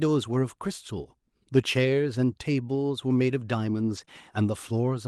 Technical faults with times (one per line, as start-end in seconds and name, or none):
3.97-4.03 lost packet rebuilt from error correction
4.05-4.09 short concealed packet loss